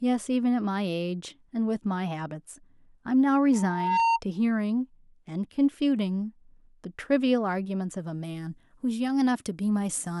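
It's a speech recording with two problems. From 3.53 to 4.2 s there's a loudspeaker feedback squeal: the mic is catching its own speaker, and the loop runs away at 920 Hz, swelling over about half a second until it sits roughly 5 dB above the talker. Then from 8.0 s to the end, pre-emphasis was left on, with the treble boosted but never de-emphasised. That gives about 10 dB of extra lift at 10 kHz relative to 1 kHz, which matches a 50 µs FM curve, so the speech turns thin, bright and hissy on the sibilants.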